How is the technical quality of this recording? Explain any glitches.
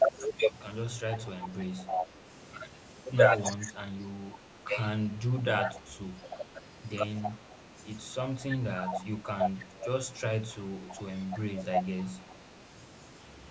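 The recording has two recurring call faults, both tied to echo cancellation.

Echo leak runs from 1.13 to 2.07 s, 3.43 to 7.38 s and 8.77 to 12.35 s. A copy of the speech returns about 300 ms later, about 5 to 10 dB quieter. A loudspeaker echo likely slipped past the canceller.

Speech suppressed in double talk occurs at 0.93 to 1.12 s, 3.57 to 4.68 s, 5.86 to 6.55 s and 10.82 to 12.19 s. The speech dips sharply, up to about 25 dB. Overlapping talk likely made the canceller duck everything. The band stops near 8 kHz, as call microphone processing leaves it.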